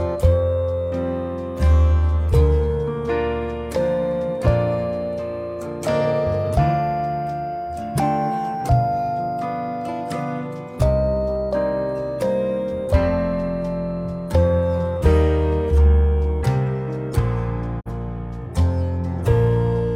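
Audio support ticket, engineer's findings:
Brief mute at 17.79–17.91 s: sound fades out over about 20 ms, a short silent hole, then resumes. Digital broadcast dropout. The receiver or decoder muted on a corrupt or missing frame. The roughly 43 ms of lost audio fits a single dropped frame. Content from that gap is unrecoverable.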